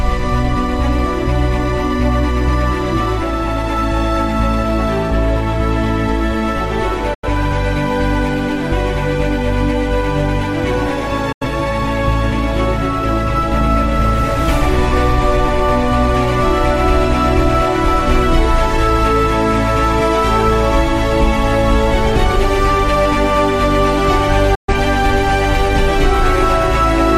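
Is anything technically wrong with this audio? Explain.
Yes, there's a digital broadcast dropout, three times: 7.14 to 7.28 s, 11.32 to 11.47 s, and 24.55 to 24.74 s. The receiver lost good frames, from a weak signal or failed checksums, and muted until clean ones came back. Each one is a quick 8 ms fade into a short silent hole, then the sound picks up later in the programme. Whatever was sent in those gaps is gone. The first two gaps fit about two lost frames, the last about three.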